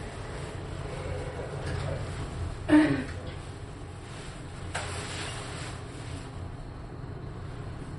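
From start to finish, the audio has a hard ceiling at about 11.2 kHz, with nothing above it, and the remaining detail has a watery, swirling quality as faint components flicker in and out from moment to moment. This is MP3 compression, likely at a starved bitrate around 48 kbps, where the encoder cuts the top band and drops weak frequency lines it cannot afford. That flickering, rather than just a dull top end, sets it apart from a plain low-pass filter.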